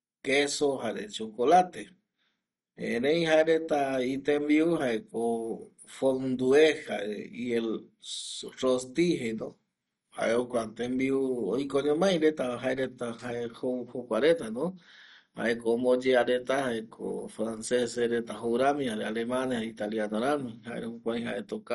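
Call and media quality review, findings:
Throughout: dull, gurgly speech with a granular edge and nothing above 11.3 kHz, likely MP2 compression at something like 48 kbps. Starved sub-bands get switched off or crudely quantised, so the top goes missing and what remains flickers.

10.20–10.83 s: speech suddenly sags about 5% slower and nearly a semitone flat (about 93 cents), then snaps back. This is likely a drift correction step, where clock-sync software jumped the playback rate to rebalance its buffer.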